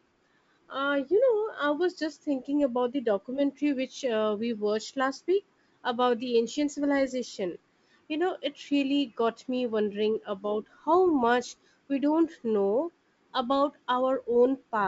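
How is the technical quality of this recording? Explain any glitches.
No glitches can be heard in this speech recording, which carries the wideband telephone character of G.722 coding at 64 kbit/s, with any coding trace at most faint.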